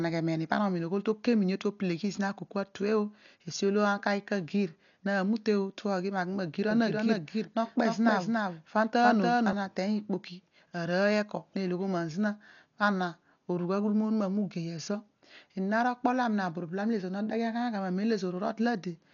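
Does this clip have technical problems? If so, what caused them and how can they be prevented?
Yes. The whole clip sounds dull and rough, with nothing above 6.9 kHz and heavy fluttery noise in the upper band. That's likely Dolby Digital compression at a low bitrate, something near 48 kbps, where starved frequency lines get filled with noise. Encoding at a higher bitrate would keep the top end clean.

From 6.71 to 9.53 s a second copy of the speech runs roughly 300 ms behind, about 5 dB quieter, dry and full-band, starting and stopping abruptly. That's likely a doubled audio track from a second capture path or an out-of-step edit. Monitoring only one input and checking edits for overlapping copies would prevent it.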